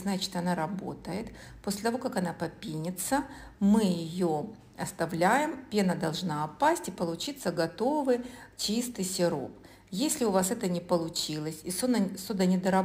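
Crude rate conversion runs throughout. Samples were repeated without filtering, consistent with a 44.1 to 48 kHz change, leaving a gritty inharmonic fizz roughly 25 dB below the sound.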